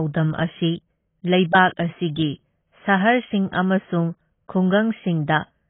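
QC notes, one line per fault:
Throughout, AAC compression: the speech is dull and smeared, with nothing above 3.8 kHz and a warbling, fizzy texture on sibilants. That texture separates it from a plain low-pass filter. The likely cause is heavy AAC-LC coding at a very low bitrate, around 16 kbps.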